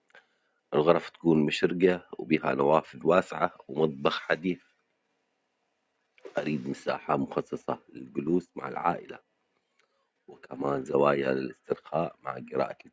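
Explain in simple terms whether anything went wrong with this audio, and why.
Nothing went wrong here: the speech came through a call's normal microphone processing, which trims away the deepest bass and keeps nothing above about 8 kHz, as a phone or video call is meant to do.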